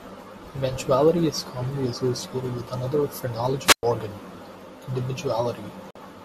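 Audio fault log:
3.63–3.83 s, wireless microphone squelch dropout: Just after "commonly associated with another", a short swell of hiss is followed by a hole of near silence lasting about 109 ms before the speech returns. The microphone's FM radio signal faded far enough that the receiver's squelch muted its output.
5.91–5.96 s, digital broadcast dropout: The speech drops to silence for 48 ms and then resumes, with that stretch of audio missing. This points to two lost digital frames. The receiver muted until valid frames arrived again, so nothing sent during the gap survives.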